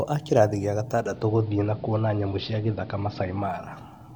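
Low bit depth without dither runs from the very start to the end. A grainy, signal-following distortion clings to the speech, roughest in the quiet tails and soft consonants where the waveform spans only a few steps. Its level sits at around 45 dB below the speech, and it likely comes from truncating the audio to about 10 bits with no dither. Because the rounding error tracks the signal rather than forming a steady hiss, it sounds like a crackly edge that appears and disappears with the speech.

Digital radio blending to analogue begins at 0.90 s, just after "a kĩrathi gĩa", and lasts until 3.74 s. The receiver lost its digital stream and cross-faded, over about 376 ms, to the station's AM broadcast. A hiss appears roughly 35 dB below it, and the level shifts by about 2 dB. At 3.74 s the receiver blends back to the digital sound.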